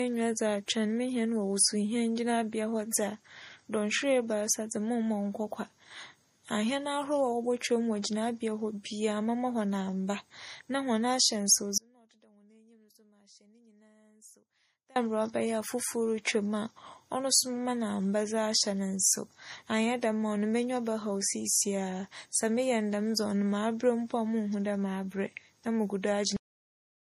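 Speech recording with three technical faults. Throughout, the spectrum stops dead at 15.3 kHz and the MP3 smearing and swirling of a starved encode stays audible despite the file's generous size. This is most likely low-bitrate audio saved at a high bitrate: a 40 kbit/s MP3 re-encoded at 256 kbit/s, which keeps the first encoder's losses and cannot restore them. From 11.78 s to 14.96 s, about 3.2 s, there is an audio dropout to a faint residue. The speech cuts out abruptly and returns just as abruptly, and the gap holds only a faint leak of the signal, roughly 30 dB below normal, consistent with a break in the feed ahead of a path that stayed live. At 26.37 s the recording has a cut-off end, dropping mid-sound straight to digital silence with no decay, as when the final buffers are never written.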